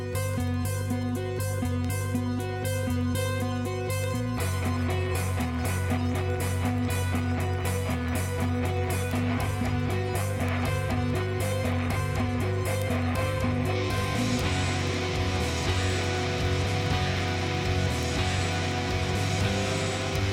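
From 0.13 s to 20.29 s, word clock ticks recur roughly every 70 ms as an unlocked receiver, about 300 ppm off, slips single samples. The steady spacing sets them apart from random clicks.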